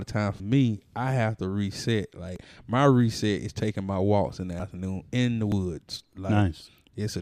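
A capture buffer was likely overrun three times, the audio being overwritten before it was collected, so in this speech clip the sound jumps ahead at 2.36, 4.6 and 5.52 s, each time losing around 40 ms with no silence.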